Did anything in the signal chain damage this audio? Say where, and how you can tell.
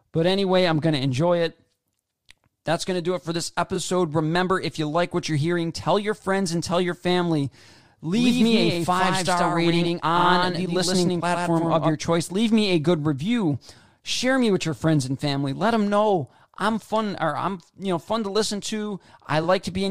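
Yes. Repeated frames: short stutters at 3.75–3.77 s (right after "do it for this"), 8.73–8.76 s, 10.20–10.25 s and 19.42–19.45 s. This is a codec or storage fault. Compressed frames were replayed once, a single 23.2 ms block or, at 10.20 s, 46.4 ms, which fits 1024-sample frames at 44.1 kHz.

Doubled audio track: from 8.13 to 11.92 s a full-band copy trails by roughly a tenth of a second, a few dB quieter, with no reverb tail, and it switches on and off abruptly. The stage is likely a second, slower capture path or an edit holding two offset copies.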